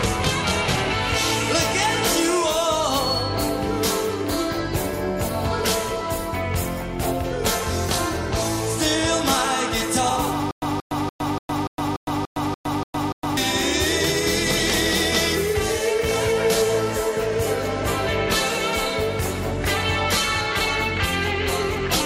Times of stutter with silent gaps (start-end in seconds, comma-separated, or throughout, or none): 10.51-13.37